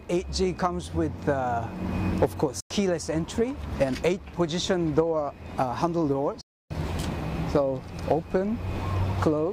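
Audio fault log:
2.60 to 2.71 s and 6.41 to 6.71 s, digital broadcast dropout: the receiver stopped getting valid frames and muted until good ones returned, so the sound fades out over about 8 ms, leaves holes of roughly 0.1 s and 0.3 s, and resumes later in the programme with nothing recovered.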